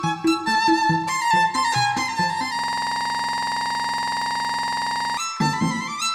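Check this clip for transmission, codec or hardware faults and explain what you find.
One hardware fault, a system hang loop, runs from 2.59 s to 5.17 s. For about two and a half seconds the sound locks into a rattling buzz at 21.5 Hz. A single 46.44 ms fragment repeats exactly, more than fifty times in a row, which fits a 2048-sample buffer. The computer or its audio driver stalled. The sound hardware kept replaying the same ring buffer, so that one slice cycled until the system recovered.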